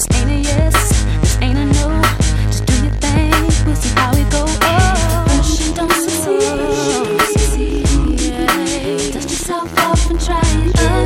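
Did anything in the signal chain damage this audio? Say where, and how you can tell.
No, nothing along the signal chain has left a mark on this audio. Listening closely, there is no point where the sound breaks up, shifts or loses part of its content.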